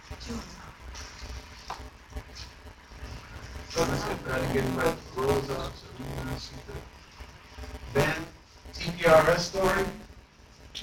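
From start to finish, buffer tearing puts a steady robotic buzz at 172 Hz on the sound, which fits a 256-sample buffer. Roughly 15 percent of each period replays audio about 20 ms old with hard joins. Unlike underrun dropouts, nothing goes silent, and the buzz fades wherever the signal does.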